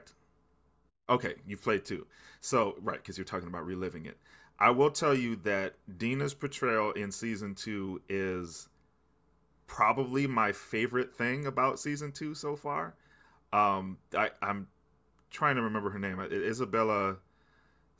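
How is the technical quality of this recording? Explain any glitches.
Technically sound, with no glitches or faults audible anywhere in the recording.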